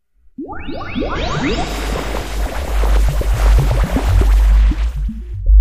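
At 1.12 to 1.17 s and 5.44 to 5.50 s, damaged data in a compressed stream makes the decoder misread frames and lose sync, leaving brief disruptions.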